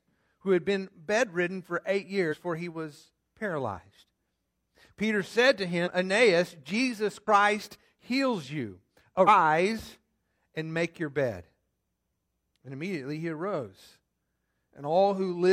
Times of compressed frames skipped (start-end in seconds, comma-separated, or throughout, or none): 2.28-2.34, 5.82-5.88, 7.23-7.27, 9.24-9.29